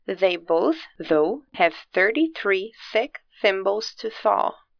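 No technical faults can be heard anywhere in the signal.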